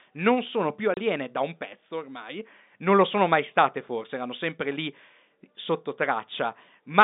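At 0.94 s the speech drops out for 30 ms, a sharp hole with hard edges on either side. This is packet loss filled with silence: the gap fits three lost 10 ms packets, replaced by nothing, over an otherwise narrowband G.711 telephone line.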